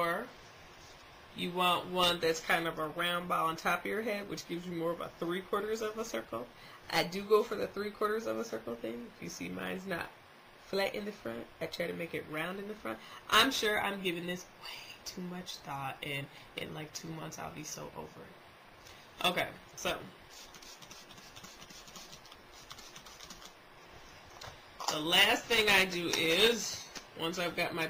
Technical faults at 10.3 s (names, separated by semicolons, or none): none